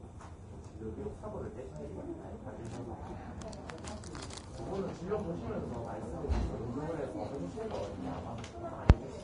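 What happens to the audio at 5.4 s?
At 5.4 s a faint, steady chirping warble sits behind the sound, roughly 40 dB down. It is timecode bleed, present throughout: linear timecode leaking in and flipping between tones near 1 kHz and 2 kHz, at a rate that fits 29.97 fps code.

The sound there is also hissy and grainy, with roughened tones, smeared attacks and nothing above 10.6 kHz, likely from Vorbis compression throughout at a low bitrate, perhaps around 31 kbps. The coarsely quantised treble turns fine detail into noise.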